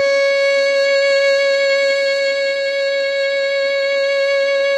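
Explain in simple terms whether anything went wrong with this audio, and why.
Nothing went wrong with this music clip. It went through a normal internet call connection, which trims away the very highest, airiest sounds above roughly 12 kHz, as such calls routinely do.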